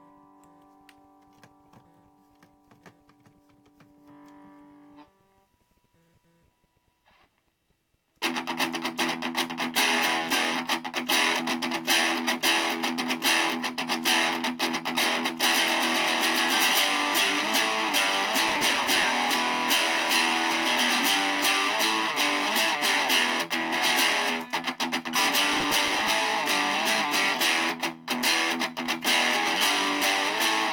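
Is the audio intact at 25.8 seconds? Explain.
No, 25.8 s sits inside a burst of processor overload crackle from 25.53 to 26.10 s, where a few dozen tiny buffers missed their deadlines and were skipped, tearing the sound gritty.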